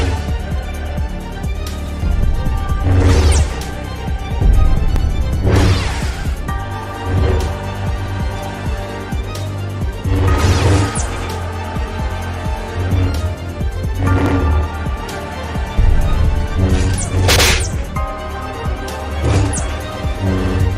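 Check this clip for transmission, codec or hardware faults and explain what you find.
The clip has one fault, overlapping chunks. It occurs at 1.86, 4.96, 8.06, 11.16, 14.26, 17.36 and 20.46 s. The audio was handled in 3-second chunks, and each new chunk began 100 ms before the previous one ended. So a 100 ms stretch plays twice at every join. You hear a brief stutter or click, a small skip backwards in the sound, recurring about every 3.1 seconds.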